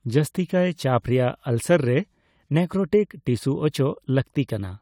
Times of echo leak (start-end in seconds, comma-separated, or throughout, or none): none